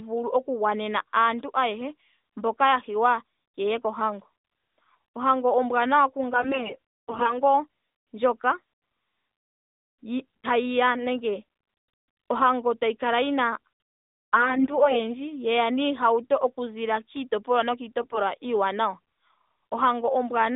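At 3.78 to 3.83 s, 6.34 to 7.39 s, 14.34 to 15.10 s and 18.02 to 18.19 s, AMR bit errors flip weakly protected bits in the narrowband 12.2 kbps stream. The speech keeps its pitch and level but turns hoarse and gargly, with no gaps like packet loss.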